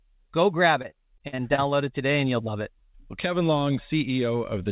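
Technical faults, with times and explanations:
0.82–1.60 s, repeated packet loss (robotic sound): Right after "go grab", the sound turns choppy until "it today and you'll". Several short holes follow one another, the longest about 50 ms. Each hole is patched by stretching the previous sound forward. That repetition gives the robotic tone. About 18% of this stretch is patched sound. The narrowband call path carries nothing above 4 kHz.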